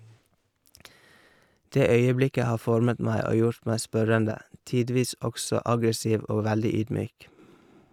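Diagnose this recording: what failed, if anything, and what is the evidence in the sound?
The speech level falls abruptly by about 6 dB twice, from 4.31 to 4.52 s and from 7.07 to 7.39 s, then returns to full level just as suddenly. Both dips have hard edges and the same depth. That pattern is the signature of a mono sum losing half its input, most likely one channel dropping out, as from an intermittent analogue connection on one leg of a stereo pair. Material common to both channels halves in amplitude, and anything carried only by the lost channel disappears.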